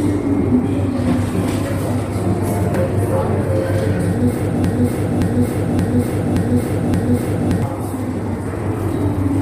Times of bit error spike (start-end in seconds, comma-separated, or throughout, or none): none